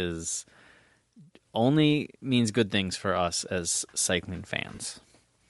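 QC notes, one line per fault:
Throughout: Bluetooth LC3 compression. The speech has a breathy, grainy top end where the upper spectrum has been thinned out and filled with noise. That is likely the LE Audio codec at a moderate rate, around 48 kbps on short 7.5 ms frames, and it's plainly audible.
4.75–4.79 s: lost LE Audio frames, just after "for us as cycling". For about 37.5 ms the decoder repeats the last spectrum with scrambled phase, so the speech turns into a brief noisy smear. That length fits roughly five lost frames.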